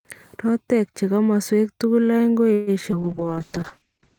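At 2.53 s the sound stalls for about 135 ms, until 2.70 s. The last sound carries on as a fading buzz or hiss, and then the audio resumes exactly where it stopped. This is a call audio freeze, likely from packets held up in transit that drained the jitter buffer. The gap is inserted rather than replacing anything, so the audio arrives about 135 ms later afterwards.

Around 2.91 to 2.95 s comes the opposite: a skip ahead. Roughly 70 ms of audio is simply gone, with only a tiny 12 ms bridge where the two sides join. Unlike the freeze, nothing is held or stretched. Playback jumps forward, shortening the delay by around 50 ms.

From 3.03 s to the end, a call bitrate drop takes the encoder from 64 kbps down to 8 kbps. The coding becomes coarse and watery, and the top of the spectrum is cut from 20 kHz to about 8 kHz, leaving a muffled sound. The roughness separates this from plain filtering.

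Overlapping it, from 3.24 to 3.80 s, a jitter buffer slow-down repeats short pitch periods to rebuild its reserve. About 56 ms is added, so playback runs at roughly 92% speed. The pitch stays the same, which distinguishes this from a tape-style slowdown.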